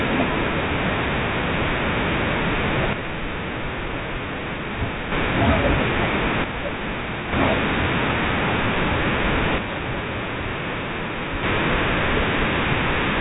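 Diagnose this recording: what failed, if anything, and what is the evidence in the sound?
The speech falls by about 6 dB three times, at 2.93–5.12 s, 6.44–7.33 s and 9.58–11.43 s: one channel drops out before the mono sum, likely a loose analogue connection.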